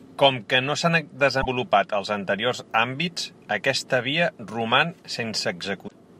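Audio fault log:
1.41–1.46 s and 5.85–5.92 s, damaged data in a compressed stream: corrupt bytes in the encoded speech stream leave the decoder unable to parse those frames, so it loses sync and scans for the next valid frame header. Each brief stretch, about 50 ms and 70 ms long, comes out as a chirp, squawk, click or short hole. The first falls between "que no s'han" and "els anteriors àmbits aquesta", and the second comes near the end of the clip.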